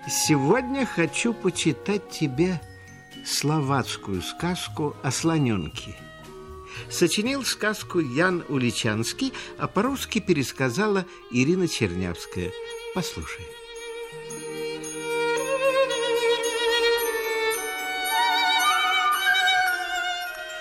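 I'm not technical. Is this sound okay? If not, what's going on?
No, there is one flaw. At about 18.48 s there is a single sharp click, caused by dropped samples. A couple of individual samples, a tiny fraction of a millisecond of audio, are missing from the stream, so the waveform jumps abruptly from one value to a later one. The gap is far too short to remove any audible sound, so only the click is noticeable. It is likely caused by a brief hiccup in recording or playback.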